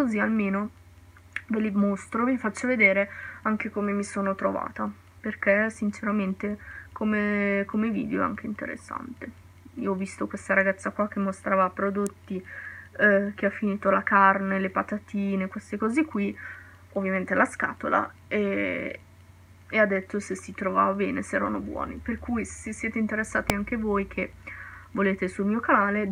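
A nearby switch, motor or static discharge likely arced into the audio line, producing an electrical switching spike at 12.07 s and again at 23.50 s. Each is a sharp snap or tight cluster of clicks laid over the sound, peaking around -10 dBFS and then around -5 dBFS.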